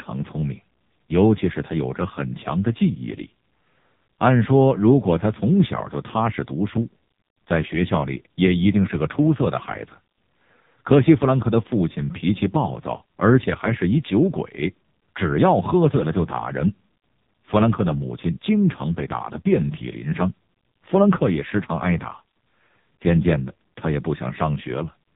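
Speech runs through the AMR narrowband mobile codec for the whole clip. Nothing above about 3.8 kHz survives, so the sound is thin and boxed in like an old phone call. The damage is heavy. The codec rebuilds the voice from a vocal-tract model fed by a few pulses per short frame, and here it has very few bits to do it. That leaves a buzzy, synthetic tone, which fits one of AMR-NB's lowest modes, near 5 kbps.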